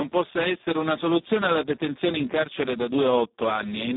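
Speech coded with the Speex codec throughout, and heavily damaged by it. The sound is confined to a narrow telephone-style band from about 200 Hz to 3.7 kHz, with nothing at all above 3.7 kHz. With so few bits left for the excitation signal, the voice comes out hoarse and noisy, which points to one of Speex's low quality settings, around 4 kbps.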